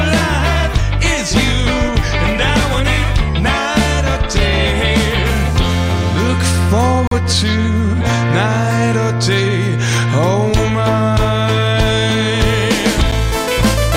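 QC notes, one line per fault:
7.07 s (41 ms) and 13.11 s (8 ms): gap between stream segments. Silence fills timestamp holes at 6 s segment joins, showing as flat waveform and blank vertical spectrogram stripes. No audio is lost.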